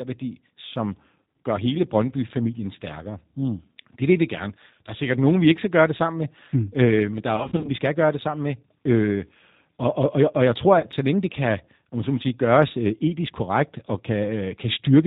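From start to finish the speech sounds rough, slightly synthetic and boxed-in, with nothing above 4 kHz: the G.729 codec, clearly audible here. It rebuilds each 10 ms frame from a vocal tract filter, pitch predictor and a few pulses, which fits an 8 kbit/s stream.

From 7.36 to 7.75 s, after "øh men der er" and before "skal gøre det sammen", the sound is stretched into a buzzy tone or coloured noise that fades, in short patches. This is VoIP packet loss concealed by the speech codec: about 140 ms went missing, scattered across 280 ms in runs of up to 40 ms. The decoder stretches its last pitch and filter at falling gain. At 10.79 to 10.87 s, between "jeg og jeg tror" and "så længe det kan", 40 ms lost in two packets does the same.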